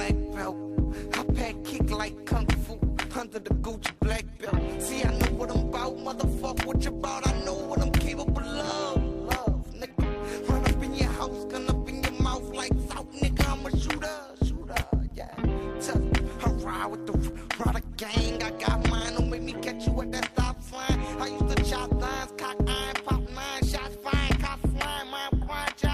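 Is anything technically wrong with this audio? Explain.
Yes, there's overlap-add ripple running from 0.4 s right through to the end. The audio has been chopped into windowed frames and stitched back together with an overlap that doesn't add up to a flat gain, so the level dips and swells once per frame, at around 200 Hz, with a depth of about 11 dB. At that rate and depth it comes across as a metallic buzz with extra tones around each note, sitting over everything.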